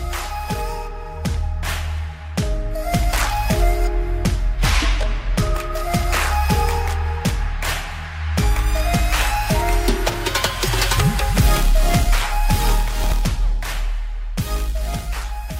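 The audio has two short spots where chunks play out of order. At 10.10 to 10.14 s, one 20 ms chunk arrives a step late and plays after its neighbour. At 13.04 to 13.12 s, a 20 ms chunk lands three chunks late. Nothing is missing. The sound is simply rearranged, so each spot is a brief jumble. Each spot has three hard joins where the misplaced chunk cuts in.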